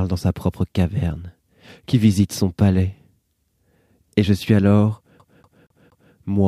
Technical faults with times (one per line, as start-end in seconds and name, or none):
5.19-6.14 CD stuck on one turn